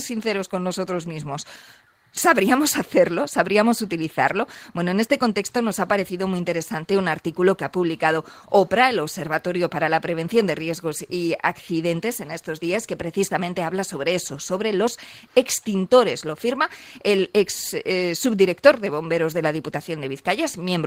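No technical faults can be heard anywhere in the signal, which keeps unbroken continuity throughout.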